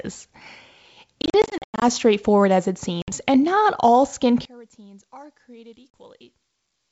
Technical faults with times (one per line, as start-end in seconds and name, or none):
1.22-1.83 packet loss on an ADPCM call
3.02-3.11 packet loss on an ADPCM call
4.45-6.91 one channel inverted
5.94 packet loss on an ADPCM call